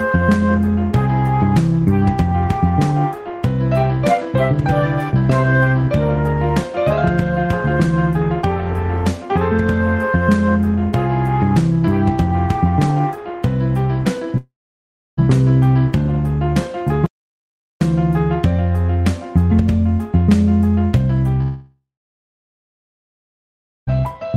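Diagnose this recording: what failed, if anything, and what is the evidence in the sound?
Long network dropout, likely from lost packets: at 14.37–15.19 s and 21.41–23.89 s, a fading concealment buzz smears then goes blank, a flat waveform and empty spectrogram.

Audio dropout to silence, likely input or link loss: from 17.06 to 17.81 s the sound cuts to silence, a dead-flat waveform with no room-tone floor.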